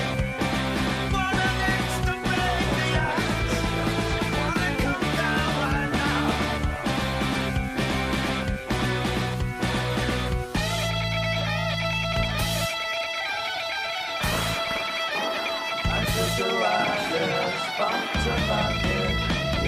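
No technical faults can be heard anywhere in the clip.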